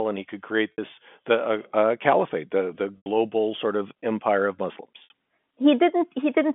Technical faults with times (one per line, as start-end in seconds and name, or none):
0.72-0.78 packet loss with pitch repetition
2.97-3.06 packet loss with pitch repetition
5.04-5.10 packet loss with pitch repetition